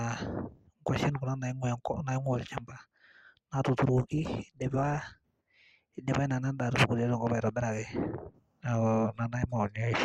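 Adaptive stream at a lower bitrate, 3.97 to 5.97 s: a mid-stream switch abruptly raises codec artefacts in the speech, which fits Opus dropping from 64 to 16 kbit/s.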